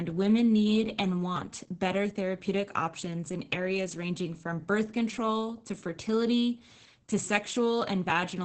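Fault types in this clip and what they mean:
Opus voice compression: low-rate SILK coding, likely near 10 kbps, removes content above 8.6 kHz and coarsens excitation, leaving speech muffled, hoarse, slightly robotic.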